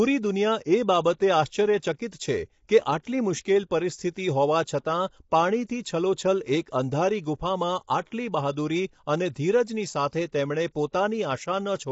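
The speech was likely squeezed through low-delay AAC compression at a low rate, fitting a 24 kbps AAC-ELD stream. Its short frames blur pitch harmonics, so the voice sounds rough and grainy throughout, with noise between harmonics and nothing above 7.7 kHz.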